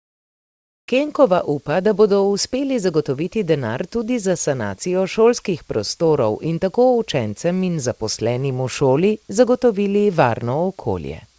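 From the start to 0.88 s, the background is a steady, featureless hiss, about 21 dB quieter than the real room sound that follows. This is comfort noise in place of the background, likely from discontinuous transmission, with the receiver synthesising noise while the sender paused.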